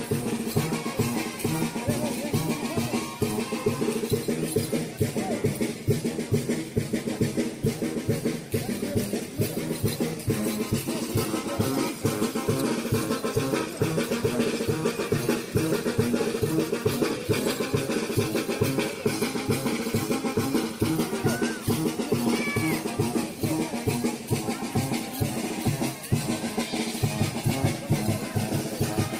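Nothing in this recording gives me a technical fault to point to, so there's nothing to flag here.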